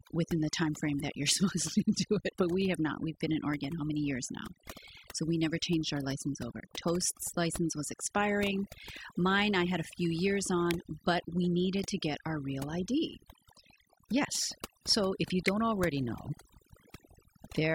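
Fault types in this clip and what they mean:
Overdone noise removal: Heavy noise reduction runs through the whole speech clip, pulling frequency bands down wherever they sit near the noise floor, so pauses collapse to near silence with twinkling specks, unlike plain low-pass dullness.
Electrical switching spike: Sharp snaps sit on top of the speech at 2.75 s after "do it but we", at 10.71 s between "had a few years" and "but we needed to", and at 15.48 s between "if you" and "already know", likely from a nearby switch arc rather than digital dropouts.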